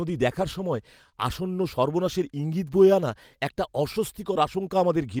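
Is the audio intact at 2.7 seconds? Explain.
Yes, the speech at 2.7 seconds is intact, with no dropout, click, distortion or other fault at that moment.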